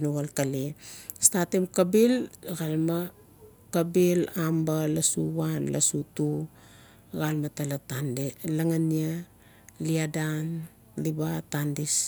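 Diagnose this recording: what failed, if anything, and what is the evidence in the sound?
Nothing stood out on listening to this speech recording that would point to a failure at any stage of the chain.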